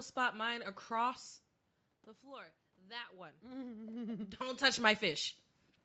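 Nothing here sounds wrong: the level dips and swells around the one-second mark and again near four seconds, just as when a talker shifts position, and the room's background noise sits underneath, with no dropout or glitch from the call path.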